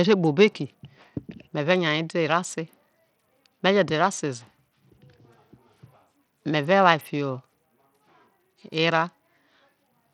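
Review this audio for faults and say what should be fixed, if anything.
Throughout the speech, the treble flickers and drops out and a gritty noise rides on the sound. The likely cause is Bluetooth SBC compression with too few bits for its upper sub-bands, which fits a bitrate near 80 kbps. On a spectrogram, the top bands blink on and off in ragged, blocky patches. Record over a wired connection or a higher-quality link instead of a Bluetooth headset.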